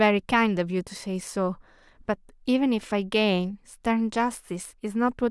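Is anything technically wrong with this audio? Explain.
No technical faults are audible.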